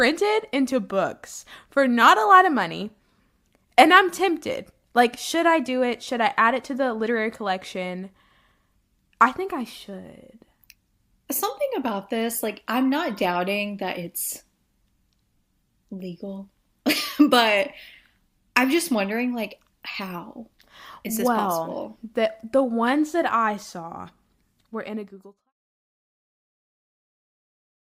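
The speech signal shows no technical faults, and its deliberate fade-out, beginning at around 24.5 s and reaching silence at 25.53 s, is smooth and free of any click or hard edge.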